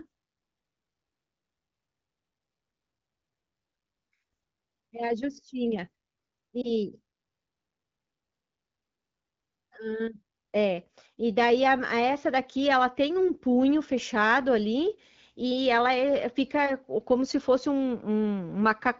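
At 6.62 s, a lost AMR speech frame disturbs the sound for about 0.1 s, until 6.71 s. A radio error corrupted the data, so the decoder filled the gap by reusing the previous pitch and vocal-tract settings at reduced gain. The result is a brief dip or warble, consistent with a single 20 ms frame being concealed. On a waveform, the amplitude sags briefly. On a spectrogram, the harmonics smear flat for a moment before the AMR wideband (HD Voice) codec's normal detail returns.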